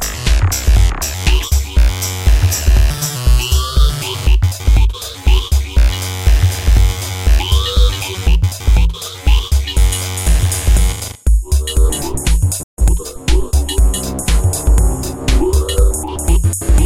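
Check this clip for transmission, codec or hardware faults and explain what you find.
Two linked playback faults occur near the end of the clip.

Playback stall, 12.63 to 12.78 s: the player likely ran out of buffered data or its thread was briefly blocked, so output went silent for about 147 ms. The sound cuts off abruptly and then resumes.

Time-compressed catch-up, 12.78 to 13.06 s: to clear the backlog left by the stall, the player drops small slices of audio and cross-fades the joins, running at 1.5 times normal speed. The sound rushes at its normal pitch.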